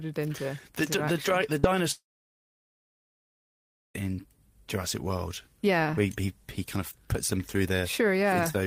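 At 1.59 s to 1.66 s, a short concealed packet loss leaves a brief smear in the speech: about 40 ms never arrived, and the receiver bridged it by extending the preceding sound before blending back. Unlike a dropout, nothing goes quiet.

From 1.91 s to 4.05 s, the speech stops. A fading continuation of the last sound gives way to near-silence lasting about 1.9 s, then speech resumes with roughly two seconds missing. This is likely a long network dropout, far longer than a concealed gap.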